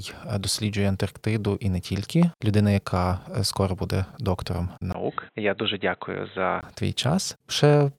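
At 2.23 to 2.25 s, between "і не" and "людина яка", a single loud pop cuts through the speech, peaking roughly 10 dB above the surrounding level. It is a sharp, brief transient sitting on top of the voice, which continues unbroken beneath it. The likely cause is a sudden voltage step or pulse, from a plug, switch, static discharge or driver glitch, entering the signal chain and being shaped by the circuitry downstream.

From 4.92 to 6.63 s, just after "скоро буде доктором", the input switched to a poorer device. A gap of about 20 ms marks the changeover, and then the speech turns dull and boxy, with nothing above 4 kHz, a drop of roughly 5 dB in level, and a new noise floor around 40 dB below the signal. This likely reflects the system moving to a narrower-band microphone or headset call profile mid-recording.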